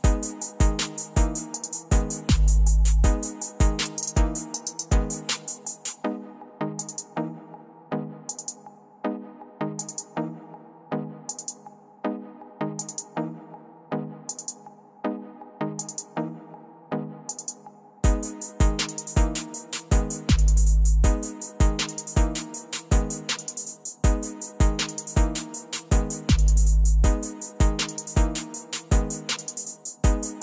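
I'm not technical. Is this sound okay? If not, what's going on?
Yes, this sound is okay. Nothing in it points to a technical problem.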